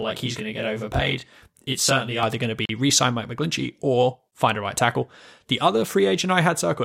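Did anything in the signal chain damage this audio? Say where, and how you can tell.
Yes. From the start to 2.23 s, just before "going to", one channel runs late by around 20 ms against the other before the two are summed to mono, a channel delay (comb filtering) at the playback or buffer stage. Content shared by both channels cancels at regularly spaced frequencies, the first notch sitting down around 20 Hz, so the sound turns rough and slightly doubled until the offset clears.

At 2.65 to 2.69 s, between "going to" and "re sign", the audio drops to about 39 ms of silence and then resumes. This is likely a Bluetooth stall on the wireless link: interference held back packets, the headphones' buffer emptied, and playback waited for the resent data before continuing. The gap is a clean dropout rather than a crackle, which points to a starved buffer, not corrupted samples.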